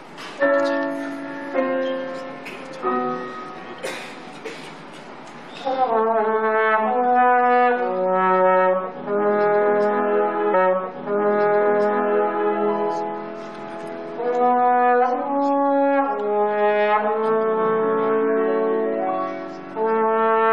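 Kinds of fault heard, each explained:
Stream segment repeated: the player queued the same chunk of the stream twice, so roughly two seconds of audio, from 10.53 to 12.53 s, plays again right after it first ends, adding about 2.0 s to the running time. A small blip marks the jump back. On a waveform the envelope between those times appears twice in a row, identical shapes side by side; a spectrogram shows the same block of patterns duplicated, with a thin vertical line at the seam.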